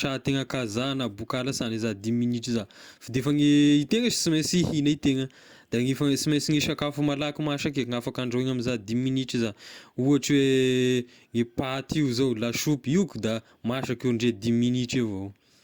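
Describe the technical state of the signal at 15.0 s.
At 15.0 s the speech signal is intact, with no dropout, clipping, distortion or other technical fault to be heard at that point.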